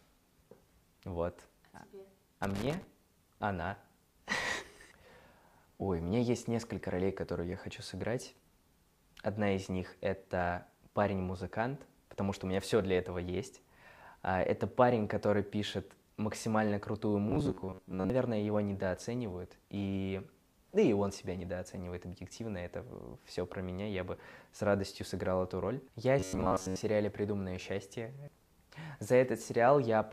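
From 2.43 to 2.84 s there is loose connector crackle. A worn or dirty contact is making and breaking as it moves. The signal gets chopped into fragments. It comes through as a short, irregular burst of scratchy crackle.

From 17.30 to 18.10 s, and again from 26.19 to 26.81 s, the audio turns robotic. It becomes a rigid, metallic buzz fixed at 93.8 Hz. The likely cause is repeated short buffers. The same roughly 10.7 ms slice loops for most of each stretch while fresh audio is skipped.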